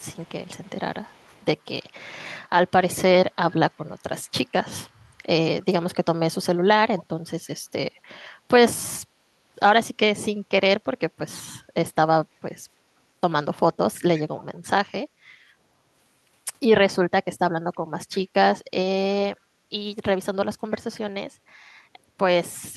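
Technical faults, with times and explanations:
0.0–0.7 s, 1.04–1.45 s, 4.24–4.3 s, 6.99–7.04 s, 13.94–14.44 s and 20.72–20.99 s: echo leak. A faint, delayed copy of the speech trails in each time, always 324 ms behind, ranging from about 40 dB below the speech at 4.24 s to about 20 dB below at 13.94 s. It is likely loudspeaker sound that one side's echo canceller failed to remove. The fixed delay and separate repeat set it apart from room reverberation, which smears continuously rather than echoing once.
15.38–15.6 s: background gated by the echo canceller. For about a fifth of a second the room noise sinks by up to about 7 dB and then returns. The canceller pulled the microphone down hard while the loudspeaker was active.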